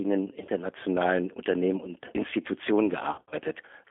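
Throughout, the G.729 codec at 8 kbit/s is plainly audible. Only about 300 Hz to 3.5 kHz survives. The speech sounds rough, thin and synthetic.

From 0.40 to 0.52 s, and again from 3.12 to 3.35 s, VoIP packet loss concealed by the speech codec appears. The decoder stretches its last frames into buzzy or noisy, fading fragments. The second gap is longer, with about 160 ms missing and a 60 ms run.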